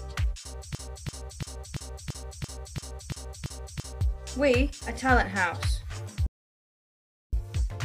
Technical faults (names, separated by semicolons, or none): broken-record loop; audio dropout to silence